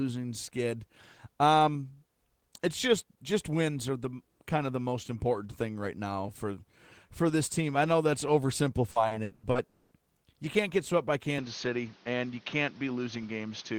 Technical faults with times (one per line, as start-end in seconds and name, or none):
8.91-9.58 repeated packet loss (robotic sound)
9.67-9.94 long network dropout
11.38-13.79 input switched to a poorer device